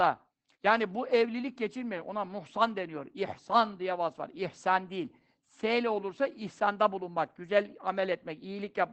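Throughout, Opus voice compression removes everything above 8.6 kHz and codes the excitation coarsely. Speech comes out muffled, hoarse and slightly robotic, which fits a bitrate around 12 kbps.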